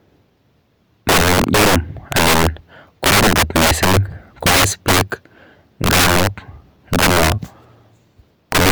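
Violent, sharp cracks break out on the louder stretches of this speech at 1.09 to 1.76 s, 2.12 to 2.47 s, 3.04 to 3.97 s, 4.47 to 5.01 s, 5.84 to 6.27 s, 6.93 to 7.32 s and 8.52 to 8.71 s. This is integer overflow. The signal is pushed roughly 11 to 14 dB past full scale, and instead of being held at the limit, each peak wraps around to the opposite extreme. That produces harsher snaps than clipping would.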